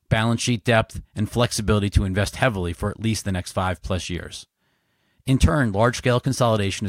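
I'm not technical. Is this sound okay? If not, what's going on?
Yes, you're fine here: I listened all the way through and didn't hear anything going wrong with the sound.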